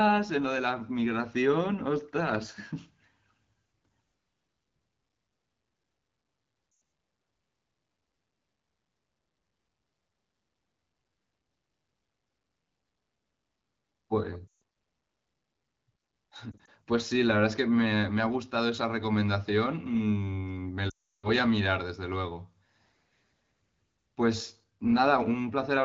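Speech with lost AMR speech frames at 6.71–6.81, 14.47–14.61, 16.52–16.69 (scattered 20 ms gaps) and 20.89–21.28 s. The decoder repeats the last good sound with falling gain, dropping to near silence within two frames, visible as smeared, decaying spectrogram bands and a shrinking waveform.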